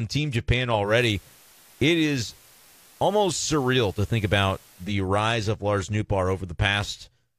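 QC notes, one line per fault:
0.83–4.95 s, digital radio blending to analogue: the hybrid receiver lost its digital stream and cross-faded over roughly 126 ms to the station's FM broadcast, then blended back just before "rise of". While on FM, the speech carries a steady bed of hiss sitting somewhere around 30 dB below the signal, the noise floor of the analogue path. The loudness shifts by about 2 dB at each blend because the two paths are not level-matched.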